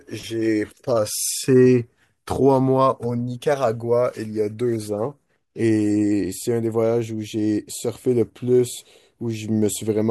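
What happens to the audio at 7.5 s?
Nothing goes wrong at 7.5 s: the speech carries on intact through that moment, with no dropout, click, distortion or other fault to be heard.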